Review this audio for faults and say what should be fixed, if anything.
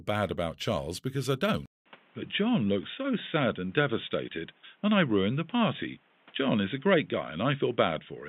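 At 1.66 s the sound drops out for 200 ms, then returns dull and boxy until the end. Nothing remains above 3.8 kHz. A new noise floor sits about 35 dB down, at roughly the same level. The input likely switched to a poorer device. Lock the recording input to one device and disable automatic switching.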